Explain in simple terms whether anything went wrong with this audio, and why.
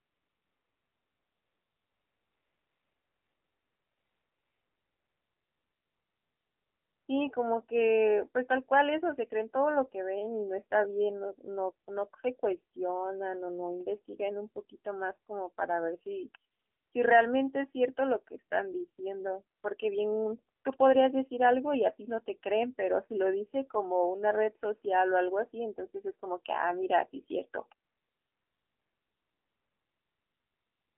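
Yes, two things went wrong. AMR narrowband mobile codec: the whole recording passed through an old-style phone codec, so speech sounds thin, muffled and buzzy, with nothing above 3.4 kHz. That artificial buzz sets it apart from simple muffling.

AMR comfort noise: at 0 to 7.08 s, 16.52 to 16.92 s, 19.58 s, 20.6 s and 27.88 s to the end, real background gives way to smooth, even hiss. It is replacement noise, not silence or a dropout.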